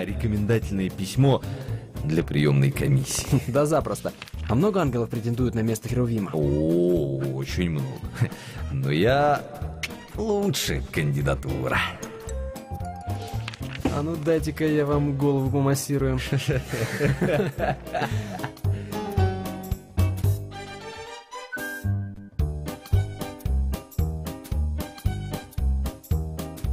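No technical faults can be heard anywhere in the recording.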